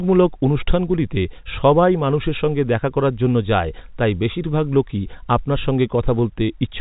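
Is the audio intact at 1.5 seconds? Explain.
Yes, the audio is intact at 1.5 seconds, with the speech passing cleanly through its telephone-band G.711 coding and no fault at that moment.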